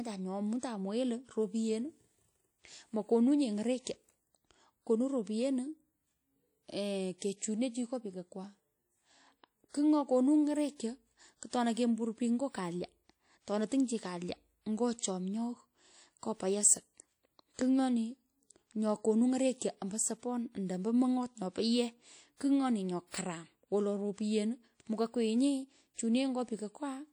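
Throughout the speech, a ringing, washy haze and a hiss that swells and fades with the voice point to likely WMA compression, damage fitting a bitrate near 48 kbps. Unlike a low-pass limit, content still reaches 20.1 kHz; the dulling comes from smeared, thinned detail instead.

Pre-echo appears at 7.18 s, 17.54 s and 19.58 s, just before "ombo sopan ando ombo". Each time, a short hiss rises 39, 48 and 30 ms ahead of a sharp onset, softening its attack. Unlike the steady codec haze, it arrives only before an attack.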